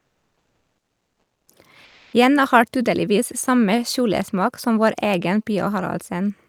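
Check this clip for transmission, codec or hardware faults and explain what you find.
Two transmission faults are present, both pointing to the sender's discontinuous transmission.

Comfort noise in place of the background, 0.00 to 1.48 s and 1.84 to 2.13 s: the real background gives way to a steady, featureless hiss, likely because the sender stopped transmitting during pauses and the receiver synthesised shaped noise instead. The first stretch sits about 56 dB below the loudest speech and drops about 5 dB. The second, about 35 dB down, holds level. A spectrogram shows a smooth, textureless noise floor.

Onset clipped by the voice detector, 1.46 to 1.48 s: the first 20 ms of the returning speech is missing, so it starts abruptly with no soft attack. This is likely the voice detector reacting late. The waveform jumps abruptly from flat noise into speech, and the spectrogram shows a hard vertical edge.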